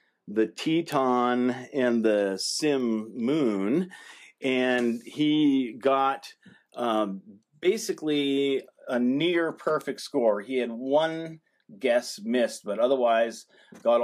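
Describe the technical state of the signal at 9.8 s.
A single bit flipped somewhere in the digital path at 9.81 s, a bit error spike confined to one sample. That corrupted sample jumps by a power of two, reaching about -16 dBFS, then the very next sample returns to the true waveform. Because the jump has nothing to do with the surrounding audio and lasts only one sample, it comes through as one isolated, sharp tick spread evenly across the whole spectrum.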